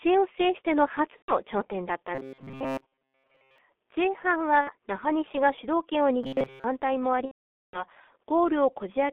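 Speech throughout has been squeezed through the G.723.1 codec at 6.3 kbit/s on a telephone line band of roughly 300 Hz to 3.5 kHz, and the coding damage is heavy. The voice sounds muffled and hoarse, with smeared consonants, because the codec's coarse 30 ms frames track the vocal tract slowly. On a spectrogram everything sits between two flat edges, with nothing above 3.5 kHz and a thin floor below 300 Hz. Three gaps show VoIP packet loss concealed by the speech codec. The first, at 1.17 to 1.32 s, covers about 120 ms of missing audio, which fits four lost 30 ms frames. The second, at 4.61 to 4.72 s, covers about 60 ms, which fits two frames. The third and longest, at 7.26 to 7.85 s, covers about 480 ms, which points to sixteen frames. In each gap the decoder stretches its last pitch and filter into a fading buzz or coloured noise, and from the third lost frame in a row it mutes. The waveform shows a decaying envelope there, and the spectrogram shows frozen harmonics thinning out before going silent in the longer gaps. 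Between 2.15 and 3.58 s, and again from 6.24 to 6.65 s, the voice turns rigid and metallic, with a fixed buzz at 133 Hz. This is robotic sound from repeated short buffers, likely caused by a roughly 7.5 ms chunk being looped while most of the real audio is skipped. A spectrogram shows evenly spaced horizontal lines at 133 Hz multiples across those spans, and the waveform shows a short identical cycle repeating.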